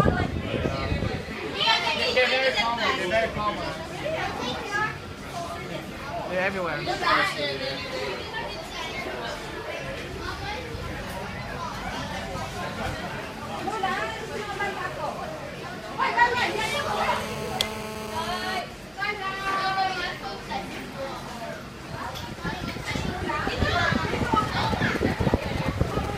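From 16.37 to 18.60 s a GSM phone buzz sits about 8 dB below the signal: a hard, raspy 217 Hz tone rich in harmonics, produced when the audio circuitry rectifies a nearby 2G handset's radio bursts during a call.

GSM signalling bursts follow from 18.71 to 20.99 s, faint at roughly 25 dB down, as the handset sends only sparse burst groups while its user is silent on the call, heard as even ticks with a longer buzz twice a second. They return from 24.25 to 26.06 s, much stronger at roughly 10 dB down, this time as standby signalling, giving the galloping dit-dit-dit of short 217 Hz buzzes.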